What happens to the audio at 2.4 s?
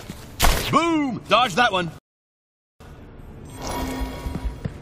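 At 2.4 s you're in the middle of a rebuffering stall running from 1.99 to 2.80 s. The player ran dry of downloaded audio and just waited, so the sound drops to silence for about 0.82 s, then carries on exactly where it left off. Nothing's skipped; it just adds time.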